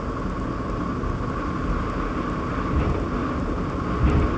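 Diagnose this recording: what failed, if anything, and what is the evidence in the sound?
What failed is the resampling stage in the driver or buffer path: the resampler is restarted on every block. Across the whole recording there's a steady tick at 10 Hz riding on the sound, and it only shows up while there's signal. That rate suggests blocks of about 100 ms being converted one at a time, which fits a 48 kHz to 16 kHz step. Each block gets filtered without its real neighbours, so every seam picks up a small error. At ten seams a second, you hear that as the regular ticking.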